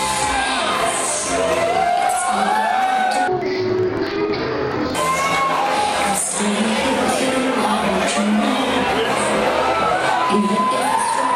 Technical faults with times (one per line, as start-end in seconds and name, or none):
3.28-4.99 interleaved audio read as planar